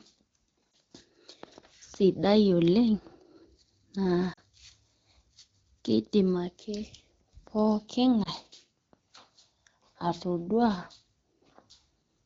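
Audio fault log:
0.73–0.76 s, 4.33–4.40 s, 8.23–8.29 s: lost AMR speech frames. Short warbly dips on the AMR-WB line, each fitting one or two dropped 20 ms frames that the decoder patched over by repeating the last good settings at falling gain.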